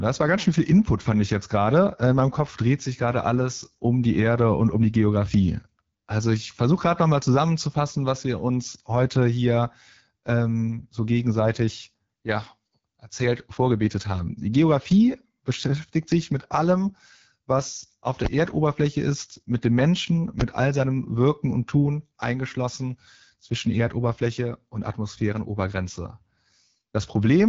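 Throughout, the speech carries the rough, raspy texture of the AMR wideband (HD Voice) codec at one of its lowest modes, which fits 8.85 kbit/s. A spectrogram shows a clean ceiling with nothing above 7.2 kHz and a noise-filled top band.

At 18.25 s, right after "mit allem was auf", invalid numbers at full scale produce a single sharp bang. A calculation broke and an 11.6 ms block, fitting 512 samples, was pinned at the rail, which appears as a flat-topped slab on the waveform and a full-height vertical stripe on the spectrogram.

The same full-scale fault repeats at 20.40 s, just before "all seinem". It is another bang from a block of about 11.6 ms driven to maximum, again a clipped rectangle in the waveform and a broadband stripe in the spectrogram.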